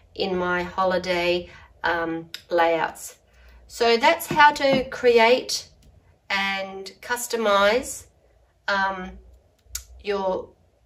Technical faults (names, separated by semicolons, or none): none